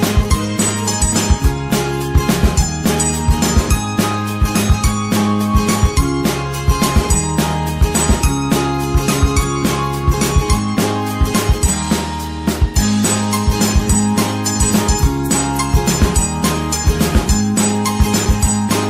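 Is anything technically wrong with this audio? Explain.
Yes. At 18.25 s there is a gap between stream segments: misaligned timestamps at a 6.0-second segment boundary leave about 3.2 ms of inserted silence, heard as a tiny click-like dropout. The waveform shows a flat-line notch, and the spectrogram shows a thin vertical blank stripe.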